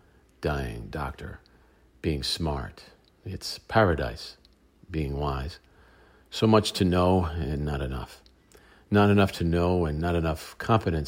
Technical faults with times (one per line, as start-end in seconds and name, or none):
none